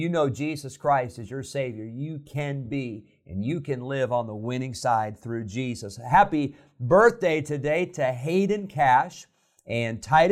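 Nothing is technically wrong with this speech clip.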